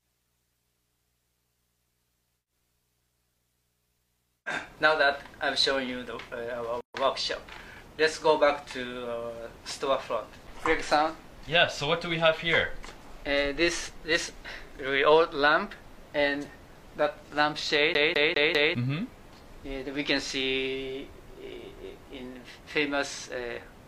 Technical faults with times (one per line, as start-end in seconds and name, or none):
6.81-6.94 gap at a join of encoded pieces
17.94-18.75 CD stuck on one turn